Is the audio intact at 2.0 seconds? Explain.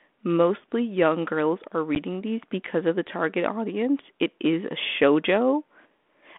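No. Packet loss on an ADPCM call strikes at 1.95 s: a single packet, about 10 ms, went missing and was filled with silence, leaving the decoder's adaptive predictor and step size out of step. The result is a hard-edged gap, after which speech resumes with brief distortion.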